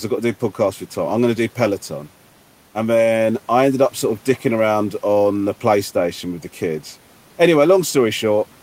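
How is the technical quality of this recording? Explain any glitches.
No technical faults or glitches can be heard anywhere in the recording.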